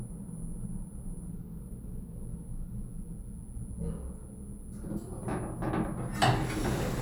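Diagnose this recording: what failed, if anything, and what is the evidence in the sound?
Nothing in the recording points to a failure at any stage of the chain, with the signal arriving intact and continuous and showing no audible damage.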